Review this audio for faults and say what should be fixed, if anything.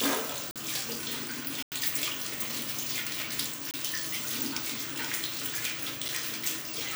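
Four blocks of digital silence cut the sound out and back: 0.51–0.56 s (46 ms), 1.63–1.72 s (93 ms), 3.71–3.74 s (28 ms), and a tick at 6.08 s. The first two fit unfilled 2048- and 4096-sample output buffers. Enlarging the buffer or raising the audio thread's priority would keep every block delivered on time.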